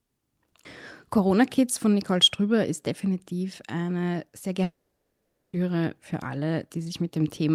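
A long network dropout is the likely cause from 4.63 to 5.56 s, when about 0.9 s of the speech never arrived. The last sound smears into a brief fading buzz, then roughly 0.8 s of silence, and speech resumes with that stretch lost.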